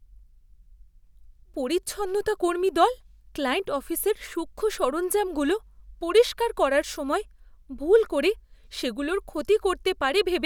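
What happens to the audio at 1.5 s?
At 1.5 s the speech carries on intact, with no dropout, click, distortion or other fault audible at that point.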